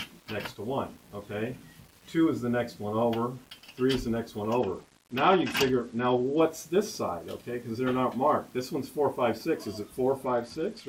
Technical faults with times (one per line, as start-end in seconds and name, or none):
0.00-10.89 low bit depth without dither
4.59-6.41 Bluetooth SBC bit pool drop
10.25-10.89 Bluetooth SBC bit pool drop